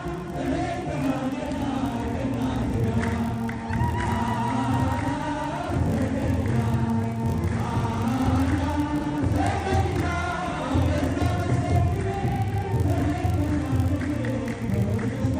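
Throughout the clip runs a buzz at 50 Hz from a filter restarted on every block. The filter drops its state at each block boundary and starts again from silence, so every block opens with a small transient. The waveform shows evenly spaced ticks every 20 ms, scaled with the signal's level, and the spectrogram shows faint vertical lines with harmonics stacked at 50 Hz intervals.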